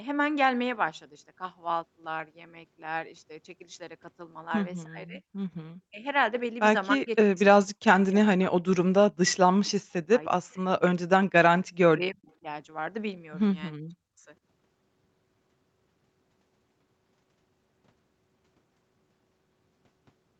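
The speech keeps dropping out in chunks at 4.85–5.21, 5.89–6.05, 6.96–8.56, 9.09–9.4, 10.07–11.34, 11.89–12.46 and 13.73–14.25 s, sinking by roughly 30 to 40 dB. That's likely speech suppressed in double talk, where the echo canceller mistook the talker for echo while both sides spoke and ducked them.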